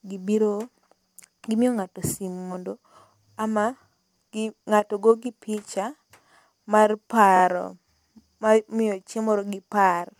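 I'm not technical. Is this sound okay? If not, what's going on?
No. At about 7.36 seconds the speech briefly stutters: one tiny slice, about 26 milliseconds long, plays three times in a row, so you hear a quick catch, possibly with small clicks, lasting until about 7.41 seconds. This is called repeated frames. Recordings like this are stored in small chunks, and here one chunk was sent or saved more than once, which fits a single chunk being replayed. That adds about 52 milliseconds to the clip.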